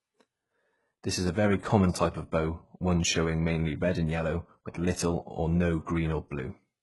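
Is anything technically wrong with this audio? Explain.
Yes. Throughout, the speech has heavily damaged, gritty, metallic s sounds and bright but artificial treble ending at 11.5 kHz. The likely cause is HE-AAC compression at about 12 kbps, which rebuilds the treble from copied lower bands, so its harmonics don't line up.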